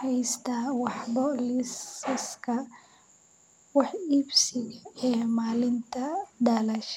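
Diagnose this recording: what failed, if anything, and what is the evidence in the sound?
Driver or buffer stage: system hang loop, 3.25 to 3.72 s. A 93 ms slice replays five times at 10.8 Hz, which fits a 4096-sample buffer.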